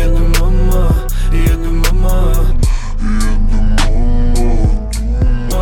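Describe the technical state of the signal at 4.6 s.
At 4.6 s the audio sits inside a section at the wrong speed, running from 2.52 to 5.52 s. Playback there is at 0.652 times the original rate. Speed and pitch drop together, so the sound is slowed and lowered by about seven semitones. It comes across deep and dragging, with every event stretched out. The likely cause is a player or editor resampling this stretch against the wrong clock.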